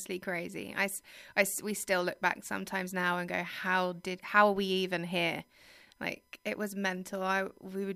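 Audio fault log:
Throughout, USB whine: a steady, thin tone at 1 kHz sits under the speech for the whole clip, faint at around 45 dB below it. Current pulled by the bus in 1 ms frames leaks into the audio through shared power or ground, so the whine repeats at exactly that frame rate. Unlike mains hum, it has no low 50 or 60 Hz buzz with its harmonics, only a high fixed pitch.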